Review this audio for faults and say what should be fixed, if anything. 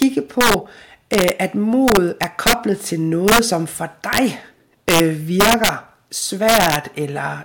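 Integer overflow runs throughout this speech: driven about 6 dB too hot, around one percent of samples wrap to the opposite sign, giving violent cracks on loud syllables. Waveforms show peaks flipping full-scale; spectrograms show broadband vertical streaks. Saturate or limit before integer conversion.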